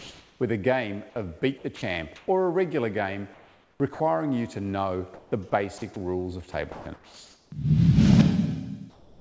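Audio passed through a wideband call path, with nothing above 8 kHz, which fits a codec such as G.722, and the background repeatedly turns into something flatter than itself. Comfort noise in place of the background can be heard from 0.0 to 0.40 s, from 3.34 to 4.00 s and from 8.90 to 9.20 s. The room tone, sitting about 33 dB below the loudest parts, loses its texture and becomes an even hiss. It is about 2 dB louder at the start and about 4 dB quieter at the end. The likely cause is discontinuous transmission: the sender stops sending during pauses and the receiver synthesises noise roughly matched to the real background. Sound chopped by the voice detector occurs from 1.58 to 2.28 s, from 5.14 to 5.96 s and from 6.52 to 7.52 s. Within each stretch quiet edges vanish into featureless fill. Roughly 240 ms, 260 ms and 740 ms are replaced respectively, likely as the detector toggles on and off several times. 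Sound dropped by the voice detector affects 3.94 to 4.00 s. About 60 ms of low-level sound is lost outright and replaced by comfort noise, likely because the detector judged it to be background and stopped sending until it triggered again.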